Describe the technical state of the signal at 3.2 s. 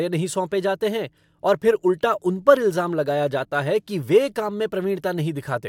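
At 3.2 s the speech signal is intact, with no audible dropout, distortion, clicks or other faults at that moment.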